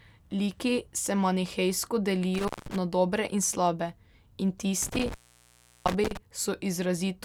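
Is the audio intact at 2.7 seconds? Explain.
No. An intermittent contact disturbs 2.34 to 2.76 s, between "se manihejsko" and "na dobre in slabe". A loose connection opens for about 186 ms, so the speech drops to faint hiss with crackle at each edge. This shows as a near-flat waveform gap bounded by broadband vertical clicks.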